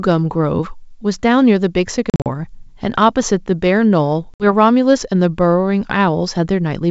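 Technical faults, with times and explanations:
2.10–2.29 s and 4.34–4.46 s, packet loss on an ADPCM call: the first stretch loses about 120 ms as several short hard-edged silent holes, the longest 40 ms, scattered across 160 ms. The second loses about 60 ms. Unlike plain dropouts in uncompressed audio, each gap leaves the G.722 decoder's adaptive predictor and step size out of step with the sender, so the speech comes back slightly distorted, settling within tens of milliseconds.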